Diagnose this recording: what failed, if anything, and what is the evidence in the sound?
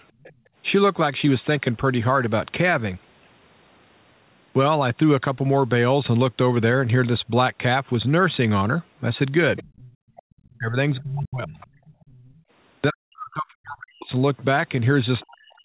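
In the call processing stage, the echo canceller left part of the loudspeaker signal in the microphone path. A faint second voice, well below the talker, sits under the sound from 0.21 to 0.35 s and again from 9.57 to 12.43 s. This is likely the other side's voice leaking through.

The same echo canceller then gated the background, clamping the microphone while the loudspeaker was active. The room sound drops out from 0.35 to 0.55 s, by about 18 dB. It drops again from 9.96 to 10.3 s, by about 37 dB, and comes back once the canceller releases.

From 9.63 s to the end of the clip, the talker's own speech dips and breaks up while the far end is also speaking, at times falling by around 40 dB. The likely cause is speech suppressed in double talk. The canceller could not separate near-end speech from the echo, so it attenuated both.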